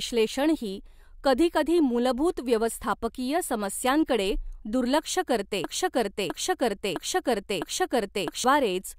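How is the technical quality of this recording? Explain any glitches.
The recording has one glitch, a broken-record loop near the end of the speech. From 5.64 s to 8.44 s, a 0.66 s fragment repeats four times back to back, likely because the stream stalled and kept resending its last fragment, so that stretch of speech is lost. A waveform or spectrogram shows identical blocks tiled edge to edge.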